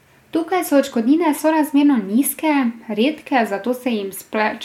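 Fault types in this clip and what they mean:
Nothing stood out on listening to this speech clip.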